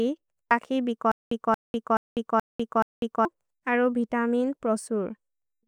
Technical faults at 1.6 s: stutter with silent gaps

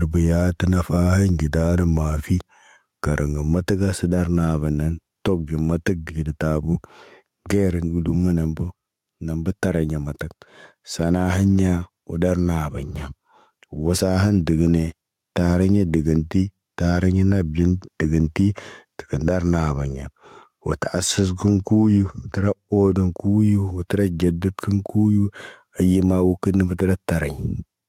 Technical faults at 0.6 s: gain pumping

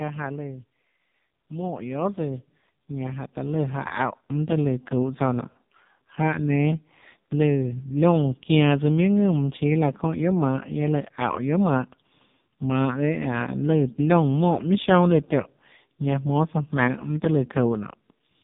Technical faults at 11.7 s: AMR narrowband mobile codec

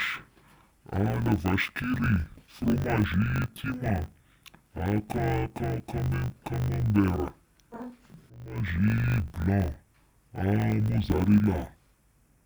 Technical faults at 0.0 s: interleaved audio read as planar

